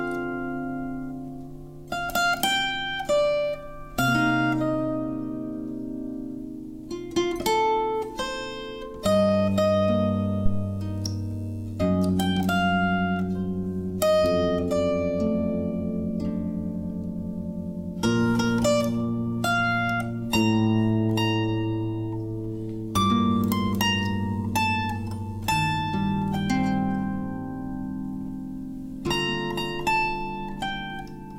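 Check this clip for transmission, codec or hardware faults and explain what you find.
One hardware fault is present. From 10.46 to 10.70 s a deep thump peaking at about -11 dBFS dies away within roughly 56 ms: a phantom power thump, where switching the supply sends a voltage step through the input's coupling capacitors.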